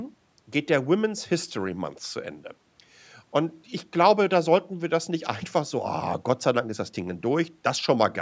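No technical faults are audible.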